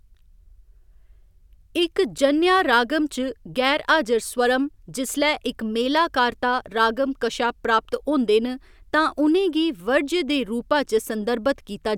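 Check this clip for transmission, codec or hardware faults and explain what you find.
Nothing stood out on listening to the speech in this clip.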